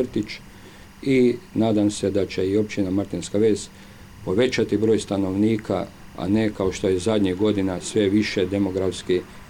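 A faint, steady chirping warble sits well below the sound throughout, flipping between tones near 1 and 2 kHz: timecode bleed from 23.976 fps linear timecode leaking in.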